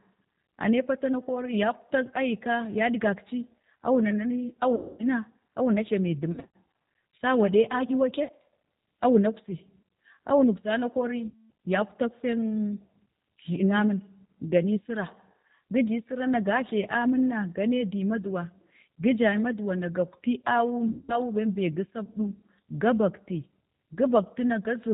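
Throughout, the speech carries the plainly audible signature of the G.729 codec at 8 kbit/s: nothing above 4 kHz, and a slightly rough, synthetic texture from rebuilding each frame out of a vocal tract filter, a pitch predictor and a few pulses. VoIP packet loss concealed by the speech codec follows at 4.75–5.07 s, 6.32–6.54 s, 8.24–8.30 s, 11.28–11.49 s and 20.89–21.20 s. The decoder extrapolates from its last pitch and filter with falling gain, so each gap smears into a fading buzz or coloured noise, and recovery stays weak briefly afterwards.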